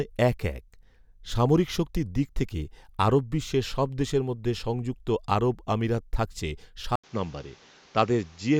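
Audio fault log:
6.96–8.60 s, input switched to a poorer device: after "সংযুক্ত আরব আমিরাত থাকছে", an 80 ms gap, then the speech loses everything above 7.6 kHz, with a new noise floor roughly 30 dB down. The level stays the same, and the gap and the new noise floor point to a likely device change rather than a filter or gain fault.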